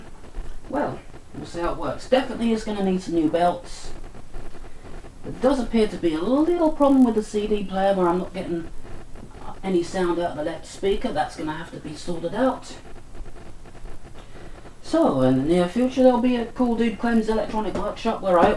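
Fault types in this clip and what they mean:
Resampler restarted on every block: each 20 ms block is converted from 48 kHz to 24 kHz in isolation, so every block edge carries a small discontinuity, heard as a 50 Hz buzz riding on the signal; spectrograms show evenly spaced vertical lines, waveforms show tiny steps at each boundary.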